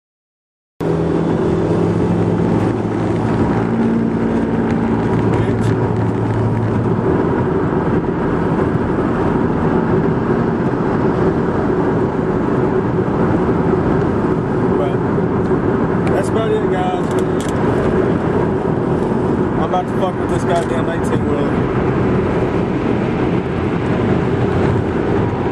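The opening 0.81 s is digital silence, and at 0.81 s the sound appears abruptly, already underway, with no natural attack or fade-in. This is a cut-off start: capture or streaming began late, so the beginning of the sound was never recorded.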